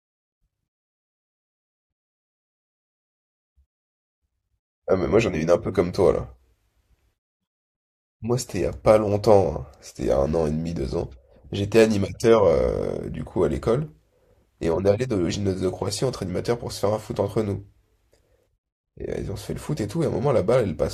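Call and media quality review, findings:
No audible faults found in this speech recording.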